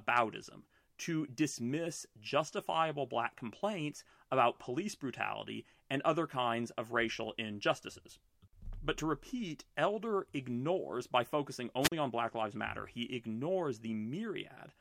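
At 11.81 s, just after "ignores by focusing", the speech suffers a wireless microphone squelch dropout lasting until 11.92 s. The analogue FM link's signal weakened enough that the receiver's squelch shut the output, leaving a hole of near silence of about 40 ms. What separates it from a digital packet dropout or a cable fault is the surge of hiss or static leading into the mute, rather than a clean cut or a crackle.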